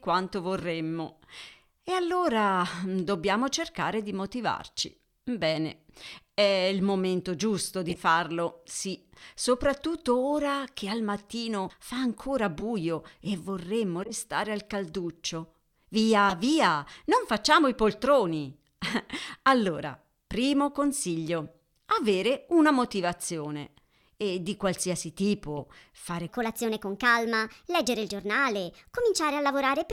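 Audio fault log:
0.58 to 25.62 s, corrupt frame decoded: short chirps and squeaky blips of noise cut into the speech at 0.58 to 0.64, 4.79 to 4.88, 7.89 to 8.00 (right after "è il momento giusto"), 12.59 to 12.63 (between "al mattino fa ancora" and "e vorremmo"), 14.00 to 14.14 (between "e vorremmo" and "al calduccio"), 16.29 to 16.33, 19.27 to 19.34 and 25.57 to 25.62 s. Damaged compressed frames were decoded anyway, so misread gains and codes spray energy at the wrong frequencies. Each burst lasts only as long as the corrupted frames.
26.28 s to the end, section at the wrong speed: the last few seconds of speech turn noticeably higher and more hurried, running 1.27 times faster and sitting about four semitones sharp. Speed and pitch shift together at that moment, which points to the section most likely being played back against the wrong clock, so the samples are read out too quickly and the whole sound is compressed in time and raised in pitch.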